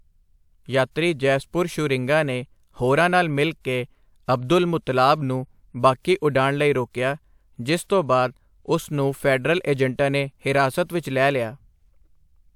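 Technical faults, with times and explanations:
Nothing technical jumps out here; the speech comes through without any audible glitches or problems to point to.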